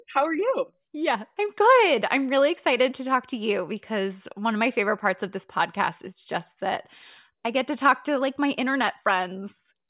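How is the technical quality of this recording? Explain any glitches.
Nothing here stands out as a glitch; I can't hear any technical faults anywhere in the recording.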